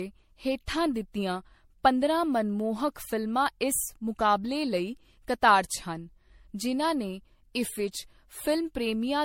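Generation loss runs through the whole speech clip. It sounds swirly, smeared and hollow, and consonant attacks blur. Nothing is heard above 16.6 kHz. The likely cause is repeated lossy re-encoding, around seven passes, in a way that fits MP3 at 64 kbit/s.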